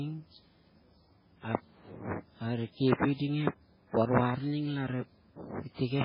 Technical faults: MP3 compression

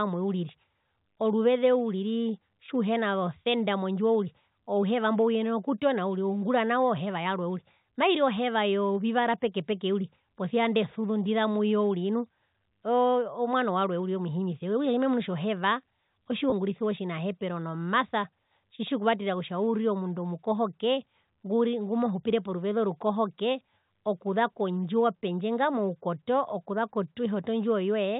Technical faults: packet loss with pitch repetition

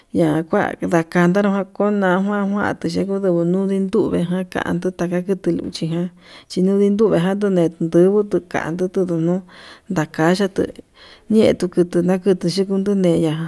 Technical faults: none

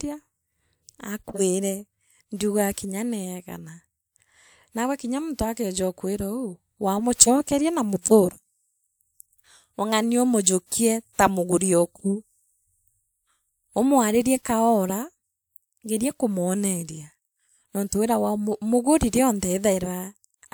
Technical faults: none

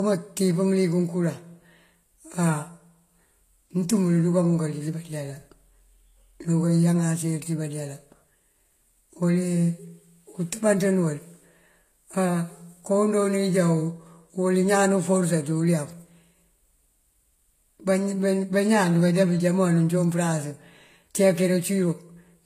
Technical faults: transcoding between lossy codecs

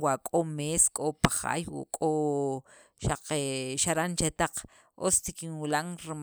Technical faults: none

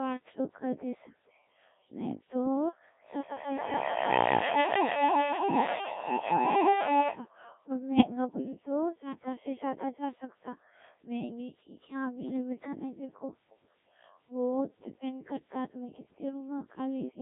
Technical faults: Codec 2 vocoder; feedback howl; bit errors on digital voice radio

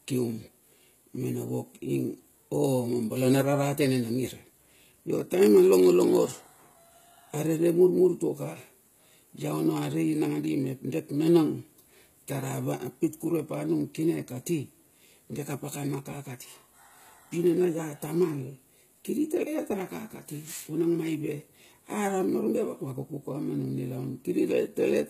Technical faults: HE-AAC compression

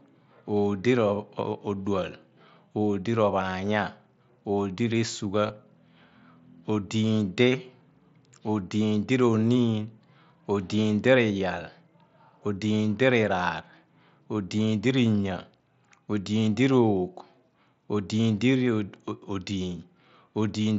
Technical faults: concealed Bluetooth headset packet loss

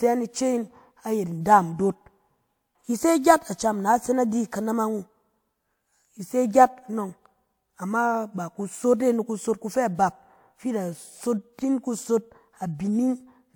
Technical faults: transcoding between lossy codecs

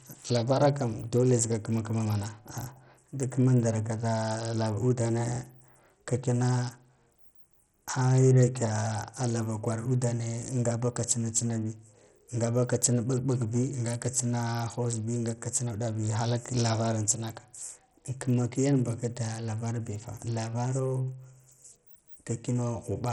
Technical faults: Bluetooth SBC compression

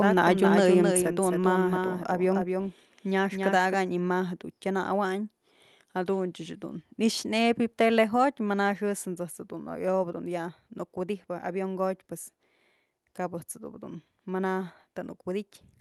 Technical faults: doubled audio track; microphone volume stepped down

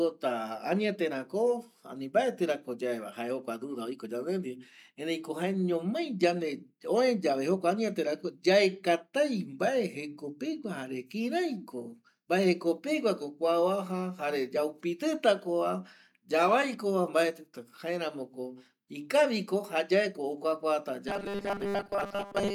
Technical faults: robotic sound from repeated short buffers

